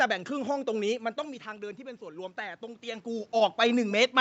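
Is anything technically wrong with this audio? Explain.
Yes, there is automatic gain rising from 0.99 to 3.11 s. After the voice drops by about 12 dB around 1 s, as the talker moves back from the microphone, the level slowly swells again, and the room noise comes up with it. The call's gain control sensed the quieter input and raised its amplification by about 4 dB over roughly two seconds, lifting voice and background together rather than restoring the voice alone.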